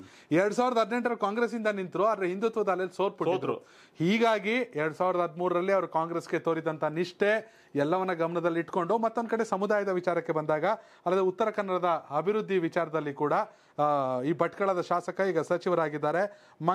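No technical faults are audible.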